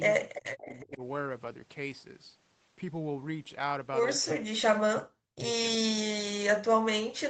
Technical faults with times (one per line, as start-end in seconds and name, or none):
0.00-1.02 speech suppressed in double talk
0.25-0.82 echo leak
4.34-5.48 speech suppressed in double talk
5.79-7.29 speech suppressed in double talk